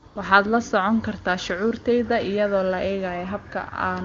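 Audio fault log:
0.07 to 0.15 s, AMR comfort noise: the phone stopped sending speech frames for 80 ms, so the real background gives way to smooth, steady synthetic hiss.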